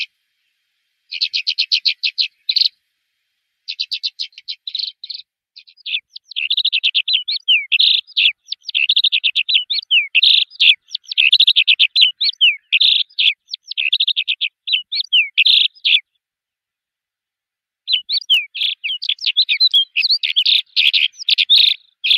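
At 4.33 s there is a stretch of lost LE Audio frames, about 50 ms long, which fits five consecutive 10 ms frames. The LC3 decoder fills the gap by reusing the last good spectrum with randomised signs, so tonal content turns into a brief noisy smear rather than a clean dropout. From 13.01 s to 13.13 s, about 70 ms of loss is scattered over 120 ms in short runs, the longest roughly 20 ms, turning tones into brief noisy smears.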